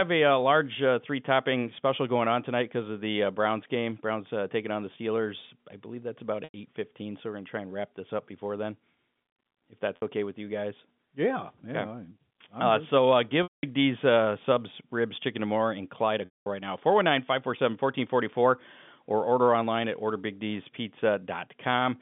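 At 6.44 s, just after "I believe that's about", packet loss with pitch repetition removes 100 ms. The receiver bridges the hole by replaying the last pitch period. It sounds like a briefly held, buzzy tone. At 9.96 s, a 60 ms gap does the same, just before "okay with you guys". At 13.43 s and 16.25 s, before "right now", the losses last 200 and 210 ms. There the repeated cycle fades to silence. Then the speech cross-fades back in.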